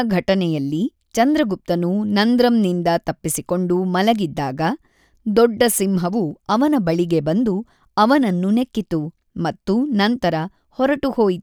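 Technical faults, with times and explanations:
Nothing here stands out as a technical fault; the speech comes through without any dropouts, glitches or level problems to point to.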